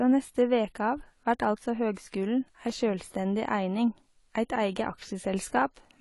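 AAC compression damage runs through the whole clip: the speech sounds dull and smeared, with nothing above 11.5 kHz and a fizzy, warbling edge on sibilants. This is likely low-bitrate AAC-LC coding, perhaps around 32 kbps, cutting highs and thinning bands.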